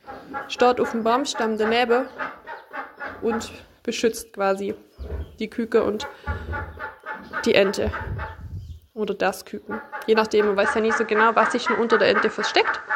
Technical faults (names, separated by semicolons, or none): input switched to a poorer device